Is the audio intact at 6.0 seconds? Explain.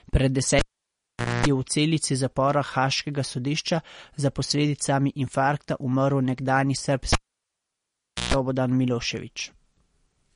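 No. At 6.0 s, as throughout the speech, the sound carries plainly audible MP3 compression damage, likely from a low-bitrate encode. Nothing remains above 10.6 kHz, and weak spectral lines drop in and out frame to frame, giving a watery, swirly texture and metallic sibilance, which fits a bitrate around 40 kbps.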